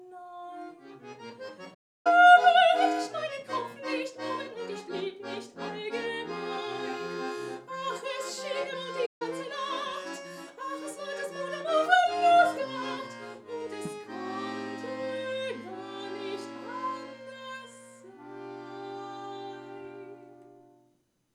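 The player likely ran dry of buffered data or had its output thread held up, so nothing reached the output until it caught up. Each playback stall cuts the sound off in mid-flow into silence. The first runs from 1.74 to 2.07 s, a gap of about 0.31 s. A shorter one follows from 9.06 to 9.22 s, lasting about 0.14 s. After each gap, the audio picks up again.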